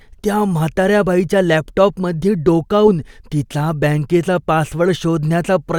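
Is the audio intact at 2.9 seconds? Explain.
No, there's a hiccup right at 2.87 s, between "त्या म्हाताऱ्या बाईच्या लॅपटॉपमध्ये" and "तिचा बँकेचा". That's compressed frames skipped: a couple of 20 ms frames never got played, either missing or rejected by the decoder, so the speech jumps ahead by roughly 40 ms. You hear it as a brief jump at the join, where the audio lurches forward.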